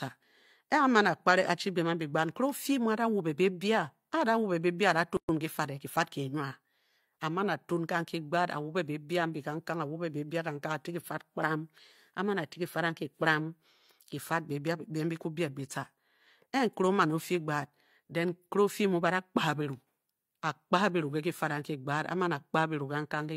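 At 5.17 s a gap at a join of encoded pieces opens: about 120 ms of silence, ending at 5.29 s before "ki fad e ki", left by untrimmed encoder delay and padding. Unlike a dropout, no speech is lost. It resumes where it stopped.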